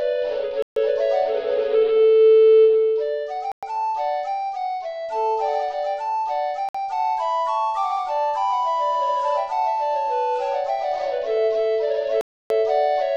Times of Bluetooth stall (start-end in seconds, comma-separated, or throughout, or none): 0.62-0.76, 3.52-3.63, 6.69-6.75, 12.21-12.50